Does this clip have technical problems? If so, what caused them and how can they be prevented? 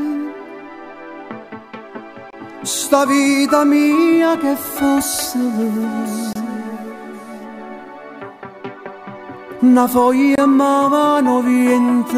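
Yes. Three brief holes of silence cut into the sound at 2.30–2.33 s, 6.33–6.35 s and 10.35–10.38 s, each 25 ms long and spaced about 4 s apart. This is a gap between chunks: the audio arrived in 4-second blocks, and silence was inserted at each join without anything being lost. Gapless playback or stripping the padding before joining the chunks would prevent this.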